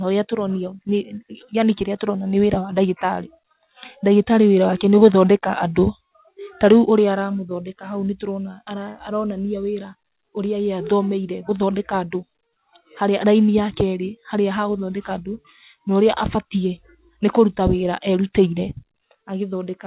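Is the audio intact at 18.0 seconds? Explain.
Yes, the speech at 18.0 seconds is intact, carried through the WebRTC call path with the narrow band typical of a telephone codec, nothing above 4 kHz.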